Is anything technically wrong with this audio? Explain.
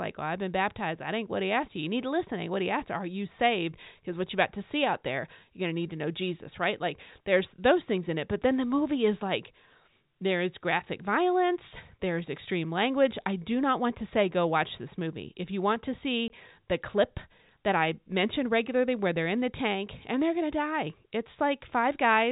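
Yes. At 16.28 s there is packet loss filled with silence: a 20 ms hole with hard edges, which fits one lost packet, with the receiver playing digital silence instead of concealing the gap. The G.711 telephone band limit to 4 kHz is heard throughout.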